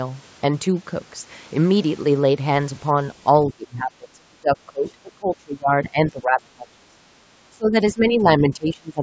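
From 3.5 to 6.88 s the talker's speech sinks and breaks up for most of those three seconds, falling by roughly 25 dB at its worst before recovering. The likely cause is speech suppressed in double talk. The far end was talking at the same moment, and the echo canceller could not tell the local talker apart from the loudspeaker echo, so it pulled the whole microphone signal down.

At 7.16 to 7.22 s the room sound briefly dips by about 6 dB for under a tenth of a second, then comes straight back. This is background gated by the echo canceller: with the loudspeaker active, the canceller clamped the microphone for an instant and released it when it let go.

The double-talk suppression likely returns from 7.5 to 7.75 s, again dropping the speech by around 25 dB, and once more from 7.92 s to the end at 9.02 s, where the speech is held down by roughly 20 dB for about a second. Each time, the canceller likely treats the overlap with the far side as echo and turns the talker down along with it.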